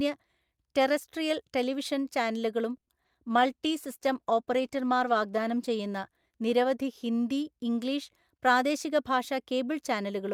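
Right after "ടെറസ്ട്രിയൽ ടെലിവിഷൻ ചാനലുകളും", from 2.77 to 3.16 s, repeated packet loss hits four times. The receiver fills 130 ms by stretching the last sound and leaves 60 ms missing, with the longest gap 100 ms. The speech turns choppy, with pieces dropped.

From 3.30 to 7.74 s, a call bitrate drop cuts the encoder from 64 to 17 kbps, and it stays at the lowest rate for 1.61 s. Coded that coarsely, the voice sounds rough and watery, and the high frequencies are dulled to a muffled tone.

Between 8.47 and 9.60 s, a jitter buffer speed-up trims a backlog of held audio by cutting short pitch-period slices, about a tenth of a second in all. Speech runs at 107% speed without changing pitch and sounds noticeably hurried.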